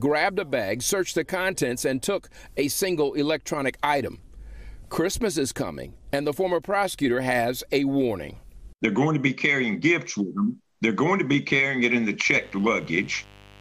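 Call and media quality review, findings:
Steady, raspy buzz from 12.26 s to the end of the clip, roughly 25 dB under the main sound. Mains buzz on a 50 Hz supply: switching spikes twice per cycle, probably from a dimmer, rectifier or unshielded cable, spraying harmonics into the kHz range.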